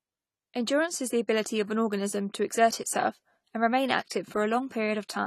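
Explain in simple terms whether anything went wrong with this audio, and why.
AAC compression, throughout: the speech sounds dull and fizzy, with nothing above 14.1 kHz, likely because the encoder threw away fine detail to save space.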